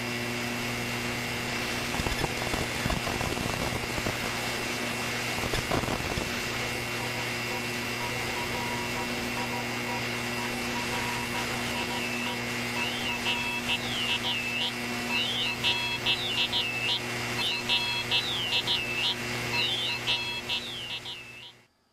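Four jumps break the flow of the audio: at 1.44 s and 13.01 s it leaps ahead by about 50 ms, at 16.26 s by about 100 ms, and at 17.37 s by about 200 ms. Each join is a short blip or click as the sound resumes further on. These are compressed frames skipped. Whole blocks of encoded audio, which fit frames of about 46 ms, were missing or rejected by the decoder as damaged, so playback continued from the next good frame.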